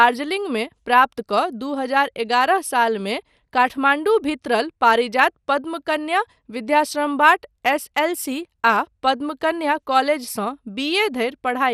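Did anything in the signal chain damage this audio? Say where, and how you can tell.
Yes. The speech sounds dull and gurgling throughout, with a granular grit and upper detail flickering in and out. That points to the codec stage, likely MP2 compression at a low rate, around 80 kbps, starving sub-bands so upper bands drop out and the rest quantise coarsely.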